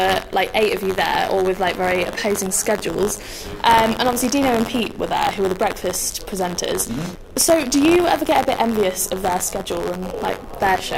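A robotic rattle at about 94 Hz runs throughout, wherever sound is present. This is buffer tearing: the buffer's writer and reader have slipped, so a small slice of each period replays audio about 40 ms old, at a rate fitting a 512-sample buffer.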